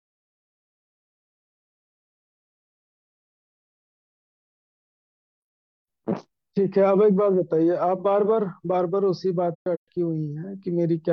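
From 9.54 to 9.88 s, the speech drops out in soft-edged holes from AAC frame loss with muting, about 256 ms silenced in total. The decoder zeroed the missing frames, so the sound fades out and back in. The longest gap runs about 150 ms.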